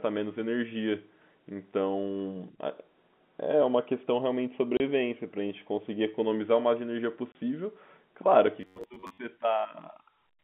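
At 4.77 to 4.80 s and again at 7.32 to 7.35 s, the speech drops into 30 ms of dead silence with hard edges. This is packet loss filled with silence, which fits one lost 30 ms packet each time. Unlike a codec glitch, the gap is pure silence rather than smeared sound.

From 8.61 to 9.21 s the speech turns into a rigid, metallic buzz at about 94 Hz that still roughly tracks the words. This is robotic sound, likely from repeating short buffers of about 10.7 ms while about half the real audio is skipped. A steady fixed pitch distinguishes it from choppy dropouts. Throughout, the narrow telephone band of the G.711 line can be heard.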